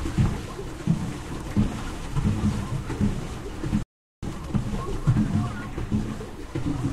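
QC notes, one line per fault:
3.83–4.23 s, playback stall: the sound cuts out abruptly in mid-flow and stays silent for about 0.4 s. The output simply ran dry. This is most likely the player starving for data or its thread being held up.
4.23–4.61 s, time-compressed catch-up: once sound returns, it runs hurried for about 0.38 s at double speed. Pitch stays normal. Small pieces are being cut out and cross-faded to clear the backlog.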